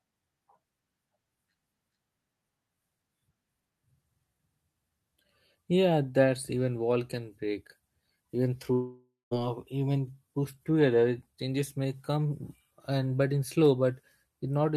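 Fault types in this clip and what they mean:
long network dropout: Incoming audio likely stopped arriving for a while, so from 8.73 to 9.33 s the receiver stretched the last sound into a fading buzz, then left about 160 ms of silence; roughly 400 ms never plays, shifting later speech by about a fifth of a second.
jitter buffer speed-up: With extra audio queued in the buffer, the receiver trimmed many short pitch-period slices to reduce its delay. From 11.26 to 12.91 s the speech runs at 109% speed with unchanged pitch, sounding hurried, as around 150 ms is cut.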